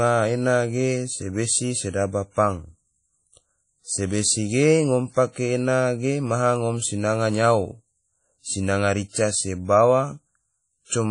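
Across the whole speech clip there is a washy, ringing quality, with a hiss that swells and fades along with the speech, and nothing is heard above about 10.1 kHz. This is likely WMA compression at a low bitrate, consistent with roughly 32 kbps.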